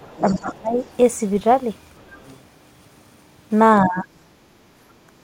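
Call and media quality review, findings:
Speech suppressed in double talk at 0.0–0.79 s, 3.82–4.09 s and 5.06–5.13 s. Talker dips deeply, roughly 20 to 30 dB. Likely the echo canceller ducking near-end speech during double talk.

Other side's voice leaking through at 0.19–0.35 s, 0.77–0.97 s and 1.98–2.38 s. Faint second voice, roughly 20 to 35 dB under the talker. Likely residual loudspeaker echo left uncancelled.

Background gated by the echo canceller at 4.49–4.78 s. Room sound drops about 14 dB, then returns. The canceller clamps the microphone while the loudspeaker plays.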